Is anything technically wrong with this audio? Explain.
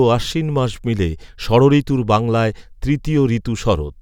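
No, nothing is technically wrong with this audio.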